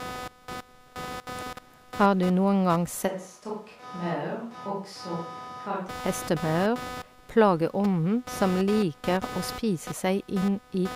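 A buzzing, chirping rasp runs under the speech for the whole clip, pulsing at around 300 times a second and sitting somewhat below the speech. This is computer activity noise: processor, graphics or mouse load shifting the shared ground of the audio circuit, so it follows the machine's activity rather than the speech.

From 3.09 s to 5.87 s the speech abruptly turns roomy and hollow, loses bass, drops a few decibels and picks up faint room noise, then snaps back. This is a switch to a distant microphone, likely because the close microphone's signal dropped out and a farther one covered the gap.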